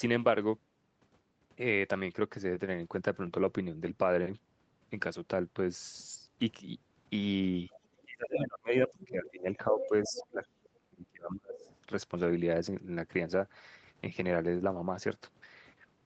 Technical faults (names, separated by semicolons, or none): other side's voice leaking through; speech suppressed in double talk